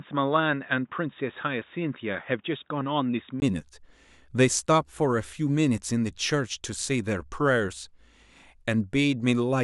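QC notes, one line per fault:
0.00–3.42 s, input switched to a poorer device: speech is dull with nothing above 3.8 kHz, a few dB quieter, over a faint separate hiss, and then opens up after a 20 ms gap. Tone, level and noise all change together, likely a device change rather than plain filtering.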